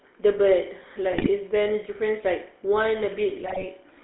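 From start to end the speech has a buzzy, gravelly roughness and a narrow, boxed-in tone, with nothing below about 300 Hz or above about 3.6 kHz. This is the GSM full-rate codec, which fits its 13 kbps coding. It rebuilds the voice from a vocal-tract model driven by coarse, regularly spaced pulses, leaving that plainly audible grit.

From 1.12 to 1.29 s, and again from 3.28 to 3.65 s, the voice breaks into squawks, pops and gargling. These are GSM bit errors. Corrupted filter, pitch and gain values reach the decoder, so individual frames come out with a warped spectrum or a jump in level. The later, longer burst is spread over more frames.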